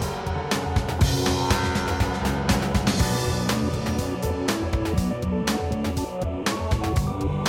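Nothing goes wrong in this music clip; there's no technical fault to point to anywhere in it.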